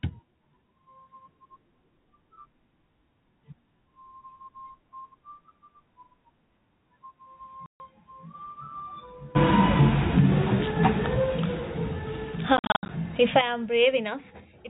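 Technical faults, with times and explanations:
7.66–7.80 s: packet loss filled with silence. A single 140 ms hole, consistent with 14 consecutive 10 ms packets, is replaced by digital silence, so the speech stops dead with hard edges.
12.57–12.89 s: packet loss filled with silence. About 220 ms of gaps are scattered over 320 ms, the longest run 70 ms, giving a stuttering, chopped sound.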